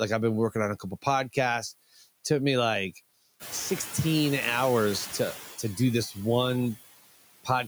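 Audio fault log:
throughout, noise suppressor artifacts: The suppressor pulls down the bands it judges to be steady noise, frame by frame, cutting the background by about 16 dB. The noise therefore sinks in the gaps between words and rises again beneath the speech.
1.93 to 2.03 s, speech cut by the noise suppressor: For about a tenth of a second the suppressor mistook part of the speech for noise and turned it down with the background, by about 14 dB at its deepest. That stretch sounds swallowed and faint.
3.39 to 5.37 s, noise suppressor catching up: The room noise jumps by about 15 dB near 3.5 s, settling about 11 dB below the speech. The suppressor's noise estimate lags, reducing the new noise by only about 8 dB at first. The noise then sinks over roughly 1.98 s as the estimate adapts.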